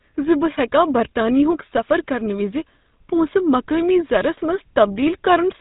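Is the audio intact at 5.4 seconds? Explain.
No. The GSM full-rate codec affects the whole clip, including 5.4 s. It models the vocal tract and excites it with sparse, regularly spaced pulses, which leaves the speech plainly buzzy and gravelly, with nothing above 3.8 kHz, consistent with a 13 kbps rate.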